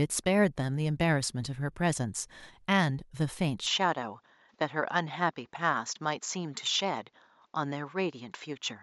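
At 3.66 s the speech abruptly loses its top end and stays that way to the end: nothing is left above 7.6 kHz, so it turns duller. The likely cause is the input switched to a poorer device, whose narrower band and different tone take over. There is no gap at the change and the loudness holds roughly steady, but a faint new noise floor appears, roughly 50 dB down. On a spectrogram, the upper band goes empty at 3.66 s.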